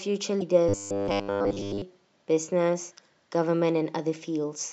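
Corrupted bytes in the compressed stream of this speech recording cause damaged data in a compressed stream between 0.37 and 0.43 s. The decoder cannot parse the frames there, loses sync and has to hunt for the next valid frame header, so the speech breaks up briefly for about 50 ms. From 0.69 to 1.82 s the speech turns into robotic sound from repeated short buffers, most likely because new audio was arriving too slowly and the playback software kept replaying the same short stretch to fill the gap. The repeats fall every 10 ms, which stamps a rigid, metallic 100 Hz buzz on the speech. Most of the real audio in that span, roughly two-thirds or more, is lost, and what is heard only loosely follows the speech underneath.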